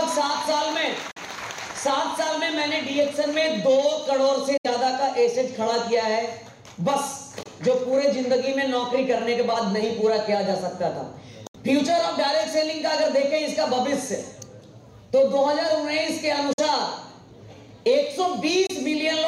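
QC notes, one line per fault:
1.11 to 18.67 s, Bluetooth dropout, likely: six abrupt silences at 1.11, 4.57, 7.43, 11.47, 16.53 and 18.67 s, lasting 23 to 70 ms, which fits one to three lost wireless frames of about 23 ms each. Sound resumes further along, as if it had kept playing.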